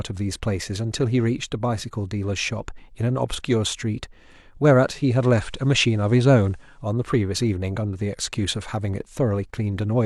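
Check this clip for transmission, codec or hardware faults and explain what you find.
There is one fault in this speech clip. From 4.85 s to 6.92 s it shows digital radio blending to analogue. The receiver lost its digital stream and cross-faded over about 398 ms to the station's FM broadcast, then faded back. During that stretch a low hiss sits roughly 40 dB under the speech. The level also shifts by about 2 dB.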